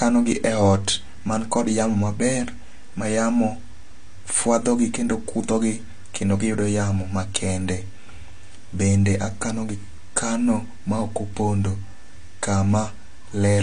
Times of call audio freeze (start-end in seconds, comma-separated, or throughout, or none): none